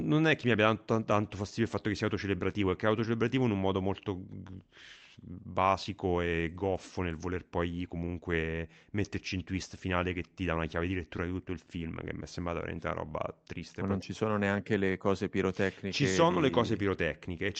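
No technical faults can be heard in the speech, which carries only the ordinary coding texture of a call path, with the top end stopping at about 8 kHz in a way that fits an Opus codec running at a moderate bitrate.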